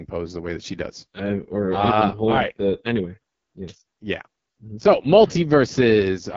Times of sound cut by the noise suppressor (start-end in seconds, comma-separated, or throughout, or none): none